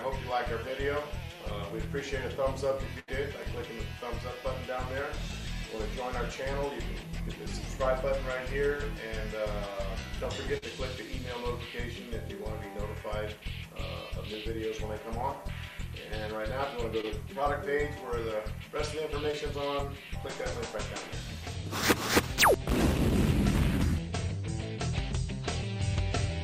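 At 2.99 to 3.10 s, a burst of packet loss drops about 80 ms of audio. The receiver extends the last sound for 81 ms while fading it down, producing a held buzz or dying hiss before playback resumes with that stretch missing.

Three short concealed packet losses follow, at 10.58 to 10.64 s (about 40 ms), 17.01 to 17.05 s (20 ms) and 19.31 s. Each time the decoder briefly continues the preceding sound and blends back, leaving a quick smear or wobble.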